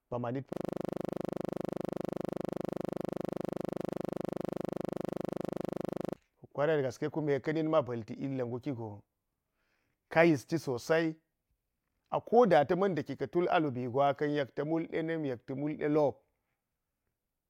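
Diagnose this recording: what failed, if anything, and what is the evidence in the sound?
System hang loop at the driver or buffer stage. From 0.53 to 6.16 s, one 40 ms slice repeats, giving a rough 25 Hz buzz while the system was frozen.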